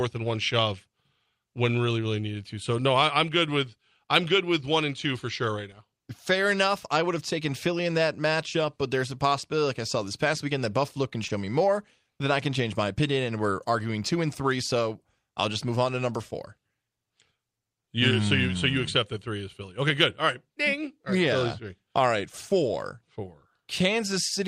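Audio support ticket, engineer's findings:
Short concealed packet loss, 11.27–11.31 s: about 20 ms of audio missed the decoder, filled by loss concealment extending prior sound, then blended back. Brief smear just before "me more then I".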